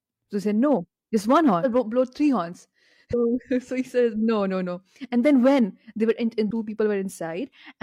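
At 1.6, 3.09 and 6.46 s, compressed frames are skipped: runs of 42.7 ms frames vanish, so the speech lurches ahead roughly 0.7, 0.4 and 0.5 s respectively, a jump that shows as an abrupt spectrogram discontinuity.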